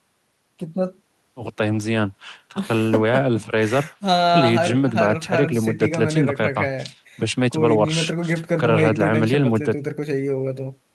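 Nothing technically wrong turns up in this bit of recorded speech; there's no fault to point to at any moment.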